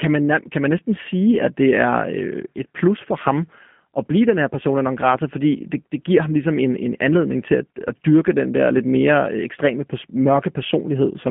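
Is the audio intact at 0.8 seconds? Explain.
No. At 0.8 s, as throughout the speech, the G.729 codec is at work. The sound is rebuilt from a vocal tract filter, a pitch predictor and a few pulses per subframe, which fits an 8 kbit/s G.729A stream. Nothing passes above 3.6 kHz, and the line band runs from 150 Hz to 3.5 kHz. Plain telephone band-limiting would only dull the sound, but here the voicing is plainly rough and synthetic.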